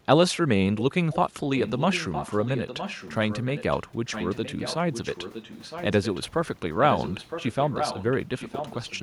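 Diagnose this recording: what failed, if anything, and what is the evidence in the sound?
Call processing failed here with an echo leak: a delayed, quieter copy of the speech about 962 ms behind it is heard in brief scraps at 0.76–0.83 s and 1.12–1.16 s, then in long stretches at 1.56–3.81 s, 4.05–6.2 s, 6.79–8.15 s and from 8.37 s to the end, mostly around 10 dB below the direct speech. The likely cause is a far-end echo canceller letting loudspeaker pickup through. On a spectrogram, faint duplicate harmonic patterns trail each phrase by nearly a second.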